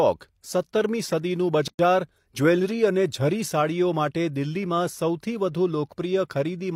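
At 1.68 s the speech cuts to 111 ms of silence, then resumes mid-flow: a gap at a join of encoded pieces, from untrimmed encoder padding.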